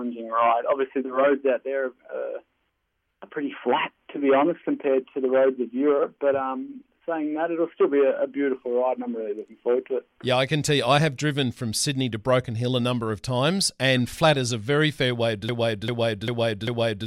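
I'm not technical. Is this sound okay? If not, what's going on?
No. Near the end, the player or stream likely stalled and kept resending its last fragment, a broken-record loop. From 15.49 s to the end, a 0.4-second piece repeats four times back to back, and whatever should have played there is lost.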